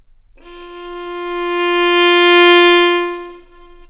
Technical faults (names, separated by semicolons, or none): short concealed packet loss